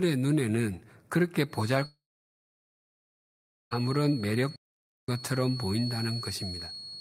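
From 1.46 s to the end, a feedback whistle sits behind the speech: a thin tone at one pitch, 4.3 kHz, well below the speech level, swelling and fading slowly. The loop from loudspeaker to microphone is likely holding right at the edge of feedback. Unlike a runaway howl, it never grows.

At 1.85 s a long network dropout begins. The last sound is stretched into a fading buzz, then about 1.7 s of near-silence follows. The speech returns at 3.81 s with roughly 1.9 s missing, likely because packets never arrived. The lost stretch, rather than a mere pause, separates it from a stall.

From 4.56 s to 5.08 s, a playback stall cuts the speech off in mid-flow for 0.52 s, likely because the player ran short of data or its thread was blocked. No fading fill comes first, and then the speech resumes.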